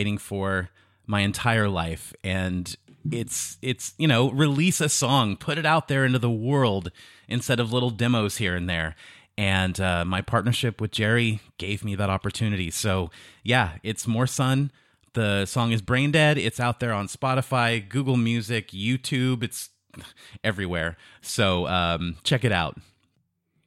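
Single sharp clicks at 8.32, 15.62 and 20.79 s are likely dropped samples, a fraction of a millisecond missing so the waveform jumps; unlike a dropout, no sound goes silent.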